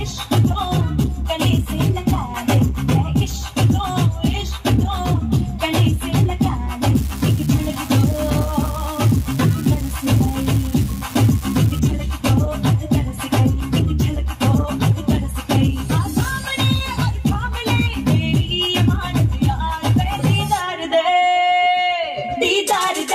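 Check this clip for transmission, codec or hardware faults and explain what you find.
One fault is present: an unreliable data bit from 6.95 to 11.80 s. A marginal data line flips one bit in a random share of samples, each error adding a fixed step of about -16 dBFS. The result is a steady crackling fizz that persists through pauses in the sound.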